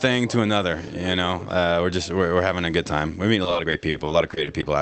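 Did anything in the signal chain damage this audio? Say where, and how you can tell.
Yes. The network stage caused repeated packet loss (robotic sound) from 3.43 to 4.65 s. About a dozen short holes, each 40 ms or less, chop the sound. The receiver fills each one by extending the last audio, so roughly a quarter of that span sounds robotic.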